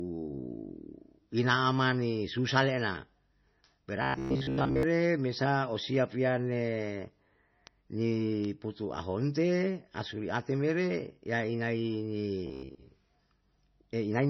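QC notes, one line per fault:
Throughout: MP3 compression, likely at a low bitrate around 24 kbps. Weak frequency lines flicker on and off between frames, so the speech sounds watery and swirly with smeared s sounds. Unlike dropouts or buzz, this damage is constant, not event-based.
4.02–4.83 s and 12.47–12.80 s: robotic sound from repeated short buffers, likely from late-arriving audio. A rigid, metallic buzz at 66.7 Hz runs through the speech. That fits a 15 ms chunk being replayed while most of the real audio is skipped. It differs from codec swirl by its fixed pitch and clear start and end.
7.67 s, 8.45 s and 9.41 s: bit error spike, each a single-sample jump from a flipped bit. Each is heard as one sharp, broadband tick unrelated to the speech. Unlike a buffer glitch, it has no duration, no repetition and no pitch.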